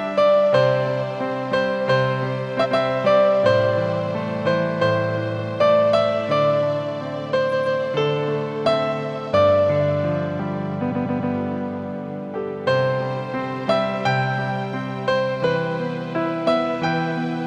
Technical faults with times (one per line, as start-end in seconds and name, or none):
2.60-2.74 repeated frames
5.34-5.40 repeated frames
7.48-7.76 repeated frames
10.87-11.29 repeated frames